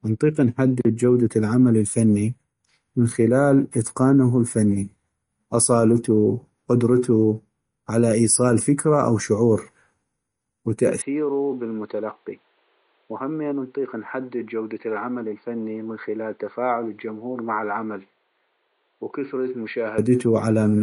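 From start to end the speech sounds watery and swirly, with smeared attacks, metallic sibilants and nothing above 10.6 kHz. This is likely MP3 compression at a bitrate near 40 kbps, where the encoder cuts the treble and lets weak frequency lines flicker between frames.

At 11.02 s the speech abruptly turns dull and boxy, with nothing above 4.6 kHz, a level drop of about 10 dB and faint new background noise, until 19.98 s. The input was likely switched to a poorer device with a narrower band.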